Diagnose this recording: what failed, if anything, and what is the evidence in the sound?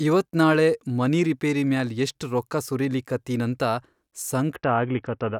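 The Bluetooth SBC bit pool drop hits the codec stage on the wireless link. From 4.56 s to the end of the clip, the treble goes dull and a gritty, grainy noise rises under the speech. That fits the sender cutting the SBC bit pool from 31 to around 6, about 55 kbps, to keep a congested link going. With so few bits, the upper sub-bands get starved and everything else is quantised coarsely.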